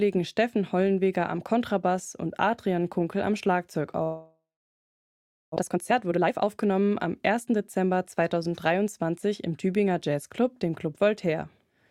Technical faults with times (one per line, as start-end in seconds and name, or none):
4.03-5.58 long network dropout
5.60-7.92 jitter buffer speed-up